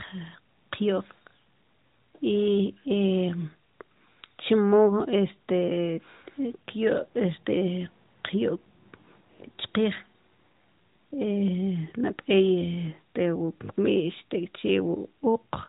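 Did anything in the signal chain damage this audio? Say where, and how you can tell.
No, nothing in the signal chain damaged this audio.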